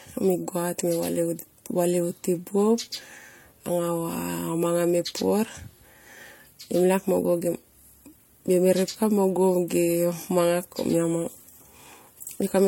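Throughout the speech, the audio has likely been passed through more than one lossy codec, a case of transcoding between lossy codecs. The artefacts point to an MP3 stage at around 64 kbit/s followed by HE-AAC at around 40 kbit/s. The second encoder spends its bits on the first one's artefacts while adding its own, so both sets of artefacts are heard at once. Nothing remains above 18.4 kHz.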